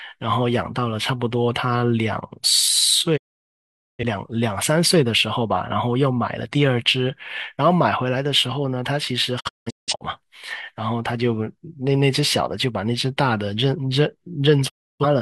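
Digital broadcast dropouts at 3.16–4.03 s, 9.39–10.04 s (short scattered holes) and 14.68–15.05 s: lost frames fade to silence within 20 ms, leaving flat waveform gaps and blank spectrogram columns.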